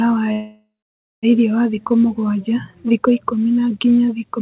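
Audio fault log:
0.32–1.25 s, call audio freeze: the last sound is held as a fading buzz, then 0.55 s of silence, and the speech resumes intact at "irĩo wa"; likely delayed packets emptied the jitter buffer.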